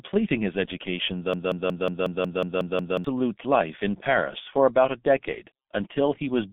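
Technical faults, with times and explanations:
Throughout: G.723.1 codec. The sound is confined to a narrow telephone band of roughly 200 Hz to 3.6 kHz, with nothing above 3.7 kHz, and the coding damage is heavy. At around 6.3 kbit/s the codec works in 30 ms frames and updates its model of the voice slowly, so the speech comes out muffled and hoarse and consonants smear together. It differs from simple low-pass filtering in that rough, buzzy texture, not just a loss of brightness.
1.34 to 3.04 s: broken-record loop. Right after "his education", a fragment of about 182 ms repeats exactly, back to back, nine times, until "life in" resumes. The stream most likely stalled and kept resending the last piece it held, so the speech that belonged in those 1.7 seconds is gone. An echo or a stutter would not do this: each repeat is identical and follows the last with no gap or decay, giving a mechanical, looping rhythm.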